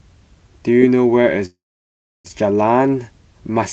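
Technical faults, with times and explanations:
1.45–2.28 s, call audio freeze: the sound stalls, a short fading buzz follows, then about 0.68 s of silence. The likely cause is delayed packets emptying the jitter buffer. Playback resumes where it stopped, nothing lost, but 0.79 s later.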